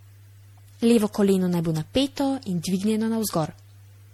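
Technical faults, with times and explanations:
Throughout, generation loss: the speech has a swirly, hollow, smeared texture with blurred consonant attacks. The likely cause is repeated lossy encoding, roughly five passes, in a chain whose character fits MP3 at 64 kbit/s. Each pass quantises on a shifted frame grid, so the noise and spectral holes accumulate. A single low-bitrate encode would be more uniform. Here the warbling runs throughout, and nothing lies above 20 kHz.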